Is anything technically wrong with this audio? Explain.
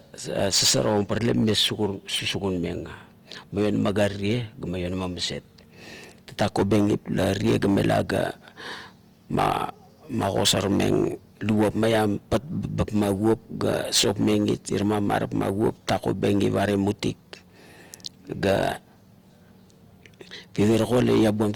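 Yes. Opus compression damage runs through the whole clip and is plainly audible. The speech has a rough, grainy texture, and its tonal parts turn noisy rather than clean. There are few holes or swirls. The likely cause is Opus in its music (CELT) mode at a low bitrate, which fits about 24 kbps. The encoder keeps each band's energy but, short of bits, fills bands with folded or noise content. The bandwidth stays wide, reaching about 20.2 kHz.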